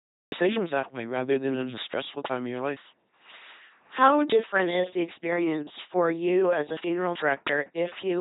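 The recording began late, a cut-off start: the first 0.32 s are digital silence, and at 0.32 s the audio switches on in the middle of a sound, just before "that way rather than". Because the capture started partway through, there is no natural onset or fade-in. The speech jumps abruptly from nothing to full level, and the sound already in progress is clipped at its front edge.

Throughout the clip, the speech has been passed through an LPC-10 vocoder. Its heavy damage fits a 2.4 kbit/s coder. Rather than carrying the waveform, the coder keeps only a small all-pole filter shape per frame and excites it with either a buzz pulse train or noise, forcing each moment to be fully voiced or fully unvoiced. The result is a buzzy, mechanical robot voice with hissy or buzzing slips where that choice goes wrong, and nothing above 3.9 kHz.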